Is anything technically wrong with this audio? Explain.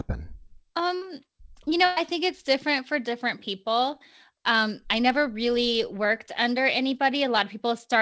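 Yes, there are two bursts of packet loss in this speech, at 0.96 to 1.03 s and at 1.85 to 1.98 s. In each, the receiver filled the gap (about 53 ms and then 112 ms) by extending and fading the last sound into a held buzz or dying hiss. When the speech resumes, about 60 ms and 120 ms of it is missing. The gaps are never truly silent, which distinguishes this from a plain dropout. Both bursts sit beneath the call path's G.722 coding, which leaves nothing above 8 kHz.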